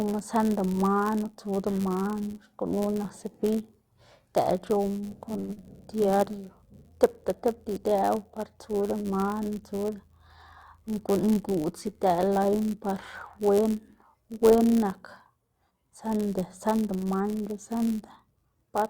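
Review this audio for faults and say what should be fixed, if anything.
A steady buzz runs under the whole clip at 99.6 Hz, which is a block size mismatch (padded). One stage is handing over blocks slightly shorter than the next stage reads, so every block gets a little run of zeros tacked on the end. Those tiny gaps repeat at the block rate and you hear them as the buzz. The padding also stretches things out: the speech plays at 0.996 times normal speed, about 0.4% slow, with the timbre unchanged. To prevent it, make the producer and consumer agree on block size, or put a proper buffer between them instead of zero-filling.

At 5.39 to 5.52 s there's a short stall from a late packet. A packet didn't show up on time, the jitter buffer ran dry, and the receiver held the last sound for 93 ms until it arrived. Then it picked up exactly where it left off, so nothing is lost, but that sound hangs a beat too long with a slight buzzy dip. 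It also pushes the playout delay up by 93 ms. To prevent it, give the jitter buffer enough headroom for the network's real arrival spread.

Right after that, from 5.53 to 5.59 s, playback does a skip ahead. Roughly 70 ms of speech is dropped while later audio was already queued, and the two sides are stitched together with only a 34 ms fill, so it sounds like a small jump forward. This looks like the buffer shedding the extra delay from the stall, cutting it by about 50 ms in one go. To prevent it, let the buffer drain gradually through time-compression rather than discarding a chunk.

From 6.03 to 6.43 s there's a jitter buffer slow-down. The buffer was running low or had just raised its target delay, so the receiver kept repeating single pitch periods and bits of pause to rebuild a reserve. That adds 45 ms over the stretch, and the speech runs at 90% speed with the pitch unchanged. Sounds come out drawn out. 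To prevent it, smooth the buffer's target adjustments so it doesn't swing low right after the stall-and-skip sequence.

Then from 10.78 to 12.05 s there's a jitter buffer speed-up. The buffer was holding more audio than its target, so the receiver snipped out short pieces of one or a few pitch periods, over and over, removing roughly 100 ms in total. The speech runs at 107% speed at the same pitch and comes across a bit hurried. To prevent it, tune the buffer's adaptation so it overshoots less and bleeds off excess delay more gently.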